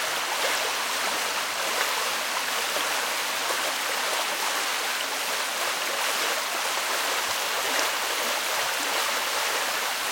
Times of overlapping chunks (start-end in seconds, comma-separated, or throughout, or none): none